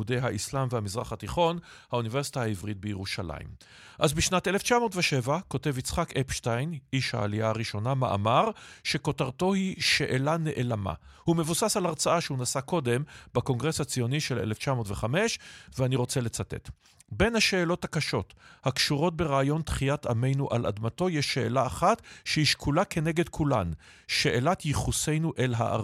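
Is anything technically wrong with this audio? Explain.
No, nothing technically wrong turns up anywhere in this speech recording.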